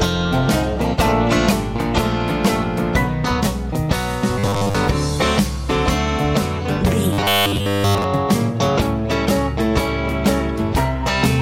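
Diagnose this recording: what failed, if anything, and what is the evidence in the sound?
Robotic sound from repeated short buffers, from 4.39 to 4.75 s and again from 7.13 to 8.04 s. In both spans the sound turns into a rigid, metallic buzz at 100 Hz. That fixed pitch fits a segment about 10 ms long being looped. The likely cause is at the driver or buffer stage: fresh audio arrived too late, so the last short block was replayed to fill the gap, and most of the real audio in those spans was skipped.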